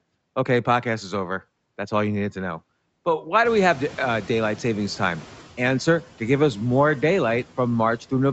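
Throughout the speech, the background noise dips between phrases and swells back under the voice. These are noise suppressor artifacts: the suppressor pulls down the bands it judges to be steady noise, frame by frame, by about 12 dB.

At about three and a half seconds, the room noise jumps sharply and comes through with less reduction from 3.45 s, cut by only about 6 dB, before sinking back by 5.41 s. This is the noise suppressor catching up: its noise estimate needed roughly 1.96 s to follow the sudden rise of around 22 dB. The call's microphone processing, with nothing above 8 kHz, shapes the band throughout.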